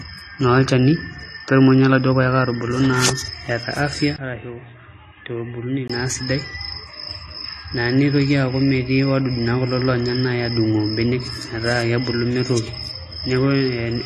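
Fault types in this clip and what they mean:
AAC compression: the speech sounds dull and smeared throughout, with nothing above 12.8 kHz, which points to AAC-LC likely coded at a low bitrate.
Input switched to a poorer device: from 4.16 to 5.90 s the speech turns boxy and quieter, cut off above 3.8 kHz, likely a change to a narrower-band microphone.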